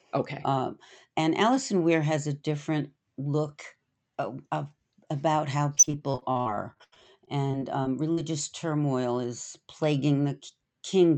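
From 5.75 to 8.19 s, right after "of of about how" and ending before "turmoil is", repeated packet loss breaks up the speech on this call path. About 21 separate holes point to packets dropped or arriving too late. Roughly a quarter of the span, about 555 ms, is patched by stretching the preceding sound, giving a robotic buzz. Another 400 ms is simply gone, with the longest hole 83 ms. A single dropout would leave one clean gap, but here the gaps are many and closely spaced.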